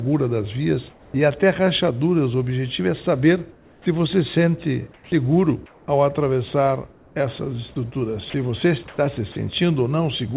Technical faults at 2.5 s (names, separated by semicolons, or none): none